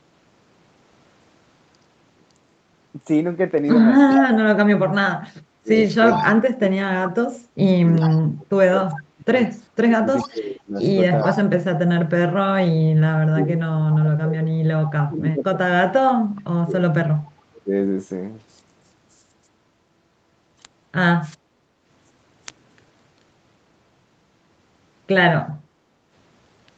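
This is speech with three kinds of call fault. An echo leak brings back a delayed copy of the sound at 4.1–4.2, 5.76–6.31, 8.0–11.41, 13.93–14.91 and 17.23–17.61 s. Each copy trails by 0.41 s. It starts nearly as loud as the speech and fades until it is very faint by 17 s. The likely cause is a loudspeaker echo canceller that let part of its pickup through. Speech suppressed in double talk runs from 4.17 to 17.71 s, about seven seconds in total, and again at 21.34–21.72 s. The voice dips by up to about 35 dB or cuts out while the other side talks. The canceller likely mistook it for echo and turned it down. Background gated by the echo canceller comes at 25.6–26.1 s. The room sound drops by about 7 dB for half a second. It returns when the canceller lets go.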